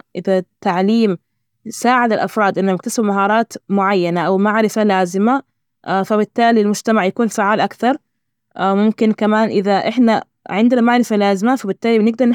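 Listening to the recording of speech, nothing stood out as a technical problem at any point.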